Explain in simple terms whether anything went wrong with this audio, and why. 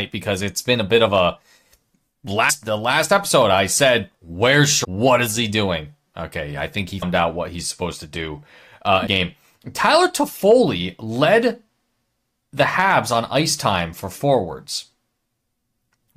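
Four short glitches break into the speech, and they come from damaged data in a compressed stream. They occur at 2.49 s, just before "the last episode I"; at 4.83 to 4.85 s; at 7.01 s, between "I think he" and "out what he's supposed"; and at 9.06 s, right after "supposed to do uh". Each time, the player hit corrupted bytes, lost its place and jumped ahead to the next readable chunk.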